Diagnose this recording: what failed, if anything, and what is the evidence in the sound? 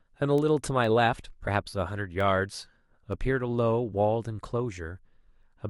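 Word clock ticks appear at the digital interface between converter and receiver. From 0.38 s to 5.43 s there are about ten sharp ticks, roughly every half second, and their strength varies. The receiver is free-running rather than locked to the sender, with a clock mismatch of around 50 ppm. Each time the two clocks slip past each other, one sample is dropped or repeated. On a waveform each tick is a single-sample step. On a spectrogram it shows as a thin full-height vertical line, and the lines fall at a regular spacing across the speech.

Compressed frames were skipped at the codec or storage stage, at 1.47 s. Roughly one frame of compressed audio, about 20 ms, never reached the output because it was missing or rejected by the decoder as damaged. The speech jumps forward by that amount. A spectrogram shows a brief discontinuity in the harmonic tracks.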